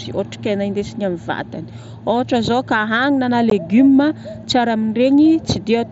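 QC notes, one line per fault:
3.50 s, unconcealed Bluetooth headset packet loss: the speech drops out for 15 ms with abrupt edges. This fits two lost voice packets on the headset link being replaced by silence rather than concealed. It is heard against the light graininess of the mSBC wideband path.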